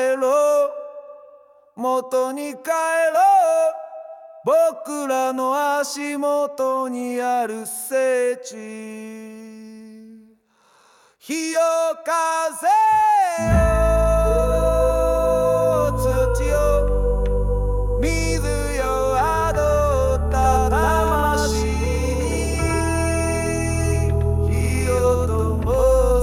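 From 20.37 s to the end, the audio carries a doubled audio track: a second full-band copy trails the original by roughly a tenth of a second at about the same level, with no decay or room colour, and it cuts in abruptly. On a spectrogram every onset appears twice, a short fixed gap apart; the waveform shows each transient echoed. A second, slower capture path is the likely cause.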